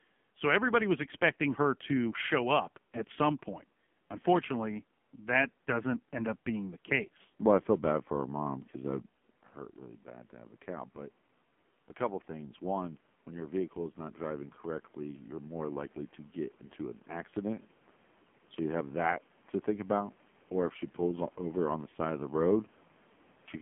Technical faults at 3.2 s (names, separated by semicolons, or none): AMR narrowband mobile codec